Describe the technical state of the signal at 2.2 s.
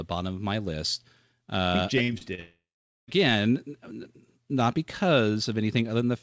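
Right around there, from 2.18 to 2.23 s, there's a short concealed packet loss. Roughly 20 ms of the call didn't reach the decoder in time, so the receiver patched the gap with about 29 ms of synthesized audio, extending the preceding sound and then easing back into the real signal. You hear it as a quick smear or wobble. The band-limited G.722 call path, with nothing above 8 kHz, carries straight through it.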